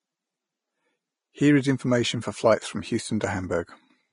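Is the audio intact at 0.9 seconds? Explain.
No. At 0.9 seconds, as across the whole clip, the speech sounds hissy and grainy, with blurred consonant attacks, likely from Vorbis compression at a low rate, around 30 kbps. Coarse quantisation turns treble detail into noise, and a spectrogram shows nothing above 10.5 kHz.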